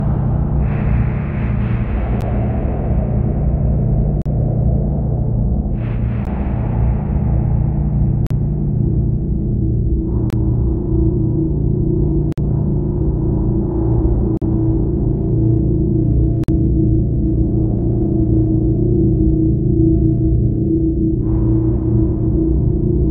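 Hard-edged silent holes of 12 to 52 ms cut the sound at 2.21, 4.22, 6.25, 8.27, 10.30, 12.32, 14.37 and 16.44 s. These are gaps between stream segments: the time stamps of consecutive 2 s segments leave small spaces that the player fills with silence.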